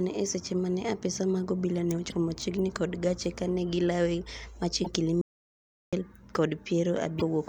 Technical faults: damaged data in a compressed stream; audio dropout to silence

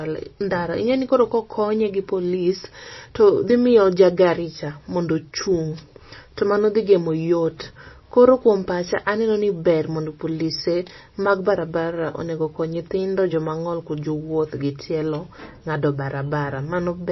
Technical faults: MP3 compression

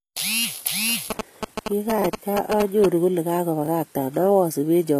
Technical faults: HE-AAC compression; GSM signalling bursts; chunks out of order

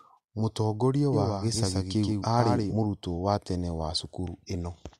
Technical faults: doubled audio track

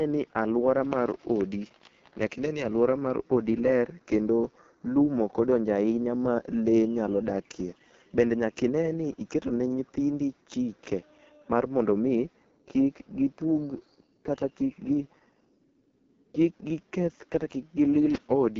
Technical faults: AMR wideband (HD Voice) codec

